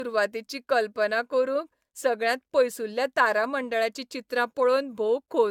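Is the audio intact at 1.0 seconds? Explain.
No. At 1.0 seconds the speech carries generation loss, present across the whole clip. It sounds swirly, smeared and hollow, with blurred attacks. The likely cause is repeated AAC encoding, around four passes at roughly 96 kbit/s, each adding fresh quantisation noise.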